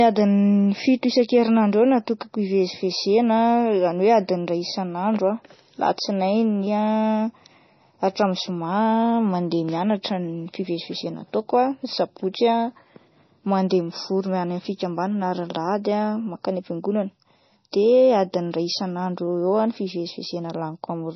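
Throughout, the speech has nothing above 6 kHz and sounds watery and swirly. Heavy damage like this is likely MP3 compression, which fits a very low bitrate near 24 kbps.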